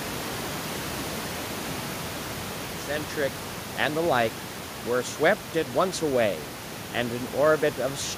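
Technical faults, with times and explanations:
No technical faults are present; the fade-in ending at 3.53 s is a deliberate edit, and the room noise sitting about 11 dB below the speech belongs to the recording itself.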